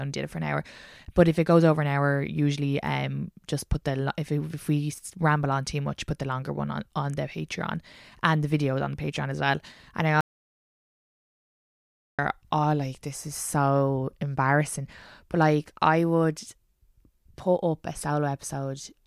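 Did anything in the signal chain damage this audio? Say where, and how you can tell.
Yes. There is an audio dropout to silence from 10.21 s to 12.19 s, about 2.0 s long. The speech stops abruptly and the gap is silent, with no room tone at all. The speech resumes mid-flow on "oh like this is". That points to the capture stage. The input was likely lost for a moment, through a disconnected device, a failed link or a mute, while the recorder kept writing silence. Whatever was said in that gap is gone.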